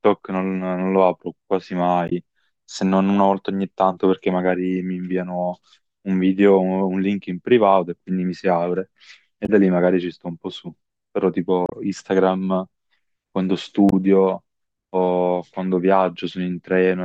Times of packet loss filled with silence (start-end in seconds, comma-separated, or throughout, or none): none